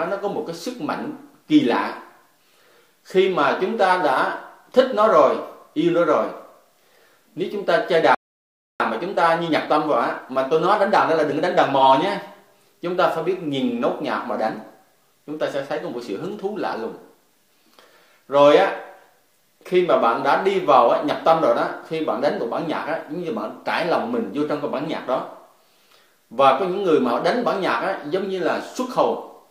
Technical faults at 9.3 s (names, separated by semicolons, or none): time-compressed catch-up